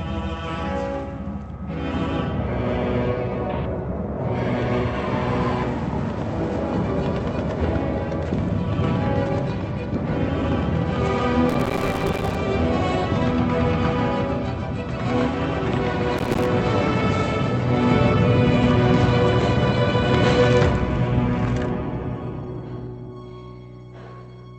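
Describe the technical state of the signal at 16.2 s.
Processor overload crackle runs from 16.17 to 16.45 s: dozens of buffers, each roughly 3 ms, arrive late and are replaced with silence, producing a dense, gritty tearing rather than a single clean dropout.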